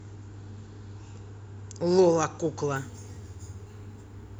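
Crude rate conversion from 2.76 s to the end (4.39 s) of this speech clip. Samples are repeated without filtering, consistent with a 32 kHz to 48 kHz change, so a gritty, inharmonic fizz sits about 25 dB below the speech.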